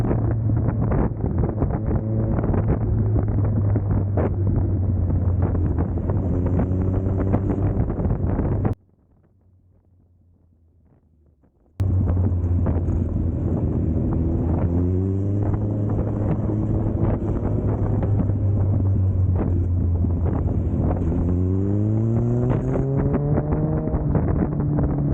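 One channel inverted, 8.73 to 11.80 s: the sound collapses by about 36 dB, likely because one stereo channel's polarity flipped, cancelling shared content when summed to mono. Call bitrate drop, 14.01 to 22.87 s: the encoder falls from 64 to 15 kbps, bottoming out for about 5.5 s, making the audio coarse, watery and dull.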